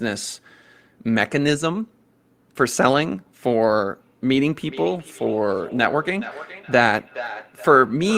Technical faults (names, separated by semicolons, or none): feedback echo between two devices